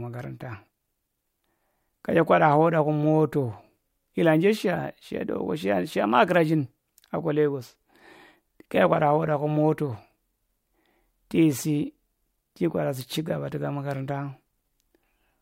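Nothing technical stands out in this speech recording; there's no fault to point to at any moment.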